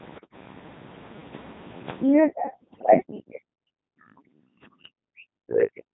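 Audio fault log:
throughout: Codec 2 vocoder. The speech sounds robotic and buzzy, with heavy damage. The decoder rebuilds each frame from sine waves using only pitch, voicing, energy and a spectral envelope, so the original waveform is gone. The synthetic tone fits the 2.4 kbit/s mode.
2.62–2.94 s: bit errors on digital voice radio. For about a third of a second the voice jumps in pitch, level and tone colour, and breaks into warbles and gibberish. Around one bit in ten is flipped, and each bad bit corrupts a whole frame's parameters.
5.02–5.94 s: speech suppressed in double talk. The voice dips and cuts out in pieces until the end, falling by about 40 dB at its deepest. The likely cause is an echo canceller turning this talker down while the far side spoke at the same time.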